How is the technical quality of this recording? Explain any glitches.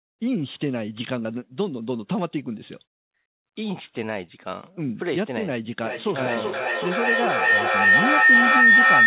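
The recording is marred by one serious fault in its final seconds; the call-quality audio itself carries nothing above 4 kHz, which fits a narrowband telephone codec such as G.711.

Feedback howl, from 5.83 s to the end: two devices in the same room form a loop, microphone to loudspeaker and back, that gains level each trip, so repeats swell rather than decay and narrow to a tone around 2 kHz. It peaks about 11 dB above the speech, with the loop repeating roughly every 0.4 s. A spectrogram shows a bright horizontal line near 2 kHz; the waveform swells into a dense block.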